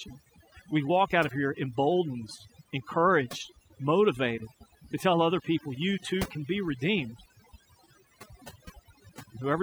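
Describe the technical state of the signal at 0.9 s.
At 0.9 s the background is near silence flecked with twinkling specks. This is overdone noise removal, present throughout the clip: an overly aggressive noise reducer cuts individual frequency bands near its noise estimate, taking quieter voice detail with them.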